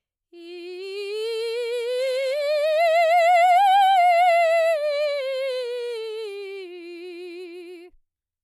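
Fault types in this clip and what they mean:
No technical faults can be heard anywhere in the music, and the signal holds steady throughout with no dropouts, distortion or level disturbances.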